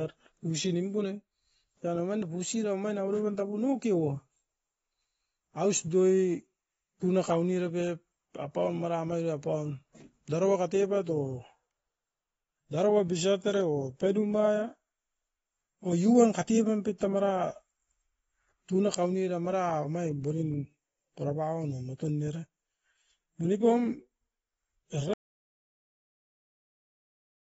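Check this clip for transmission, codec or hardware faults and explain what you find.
Two faults are present: plainly audible codec damage across the whole clip, and a dropout to silence at the end.

AAC compression runs throughout. Nothing is present above 7.7 kHz, so the speech sounds dull and closed in. Sibilants turn fizzy and smeared, and sustained sounds have a warbling texture. The likely cause is AAC-LC coding at a low bitrate, consistent with about 24 kbps. The encoder lowered its cut-off.

An audio dropout to silence starts at 25.13 s and lasts to the end. The speech cuts off mid-flow. What follows is silence, with no room tone underneath. The input was likely lost, through a disconnect, a failed link or a stray mute, while the recorder kept writing silence. Whatever came after that point is gone.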